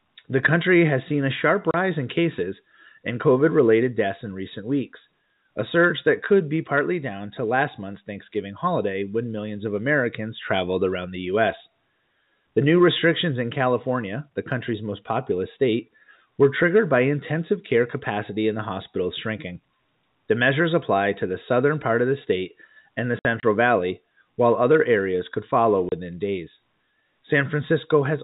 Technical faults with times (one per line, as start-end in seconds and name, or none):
1.71-1.74 packet loss filled with silence
23.19-23.43 packet loss filled with silence
25.89-25.92 packet loss filled with silence